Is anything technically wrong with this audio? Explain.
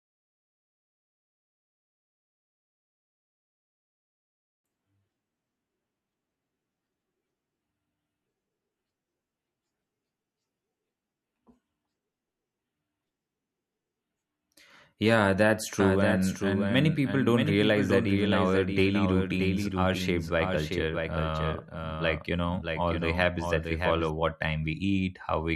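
Yes. From 15.80 s to 24.10 s there is a doubled audio track. The likely cause is a second, slower capture path or an edit that left two copies of the speech running out of step. A full-band copy trails the original by around 0.7 s at a level a few dB quieter. Because it has no reverberant tail or room colouring, it sounds like a distinct second voice overlapping the first. It cuts in and out abruptly at both ends.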